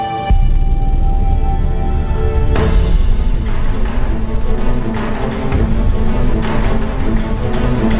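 Nothing goes wrong here, and what you hear is simply the ordinary sound of a call line running G.711 A-law at 64 kbps, with everything above 4 kHz gone as that codec always does.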